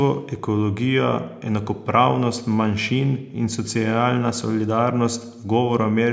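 No technical faults can be heard in this speech.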